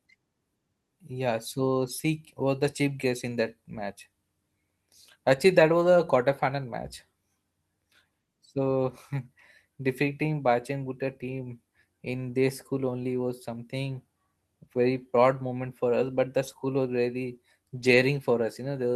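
Lost packet rebuilt from error correction at 16.47–16.53 s and 17.79–17.93 s: the next packets' low-bitrate copies fill the loss, so the speech stays unbroken but turns briefly rougher and noisier.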